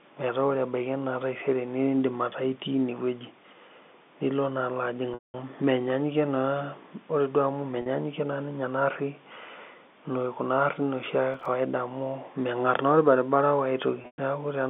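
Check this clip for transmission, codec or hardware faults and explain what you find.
Two kinds of fault are present: packet loss with pitch repetition in three places and one burst of processor overload crackle. All of it is carried on a telephone-band line consistent with G.711 mu-law coding, passing roughly 200 Hz to 3.6 kHz.

Packet loss with pitch repetition occurs at 5.14–5.34 s, 7.82–7.86 s and 14.02–14.18 s. The receiver bridges each gap by looping the last pitch period. The 40 ms loss sounds like a briefly held, buzzy tone. The 200 ms loss and the 14.02 s cluster, whose longest run is 120 ms, fade out to silence before the speech cross-fades back in.

Processor overload crackle appears at 11.34–11.46 s. The processor missed a run of buffer deadlines in a row, with each miss leaving a hard-edged gap of silence, which fits buffers of roughly 3 ms. Together these tiny dropouts form a short, gritty crackle that stops once the load clears.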